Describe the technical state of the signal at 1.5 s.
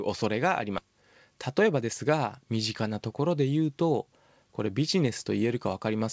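At 1.5 s a jitter buffer speed-up is under way, from 1.36 to 1.89 s. The buffer held too much audio, so the receiver cut short pitch-period pieces repeatedly, about 70 ms in all. The speech runs about 11% faster at unchanged pitch and sounds hurried.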